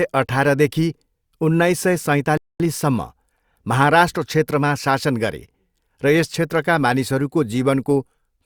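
At 2.37 s the speech drops to silence until 2.60 s, a rebuffering stall: playback drained its downloaded audio and halted until more data arrived. Speech then resumes exactly where it stopped, with nothing skipped, adding about 225 ms of dead air.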